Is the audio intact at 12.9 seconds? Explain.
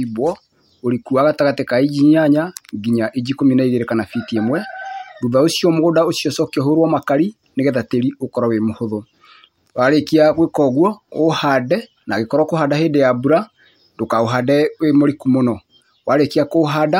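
Yes, at 12.9 seconds the speech plays through cleanly, with no dropout, click, distortion or other fault to be heard at that point.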